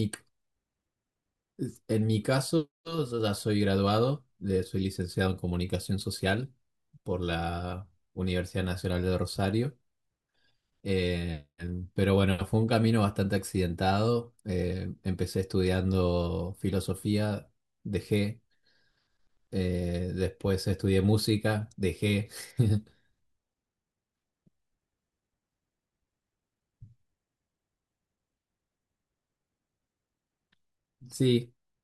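No technical faults can be heard anywhere in this speech recording. The signal holds steady throughout, with no moment that stands out as a problem.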